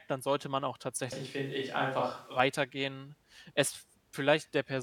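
A speech clip in which the close microphone's feed likely dropped out, leaving the recording on a distant microphone from 1.12 to 2.40 s. There the voice abruptly turns roomy and hollow, thinner in the bass, with room noise rising to about 30 dB below the speech, then snaps back.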